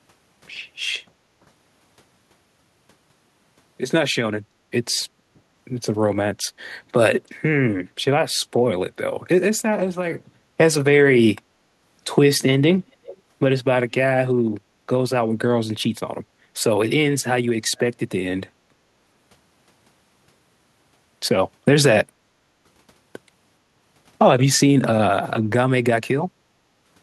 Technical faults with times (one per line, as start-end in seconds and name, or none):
5.29-5.42 background gated by the echo canceller
13.05-13.18 echo leak
16.35-16.51 background gated by the echo canceller
18.64-18.76 background gated by the echo canceller
26.62-26.76 background gated by the echo canceller